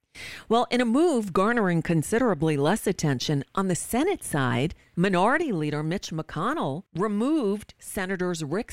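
Speech runs at a steady level until 5.42 s, where a sudden gain jump drops everything by about 4 dB and it stays there to the end. The background noise falls with the voice. The likely cause is a gain setting applied instantly, without a ramp.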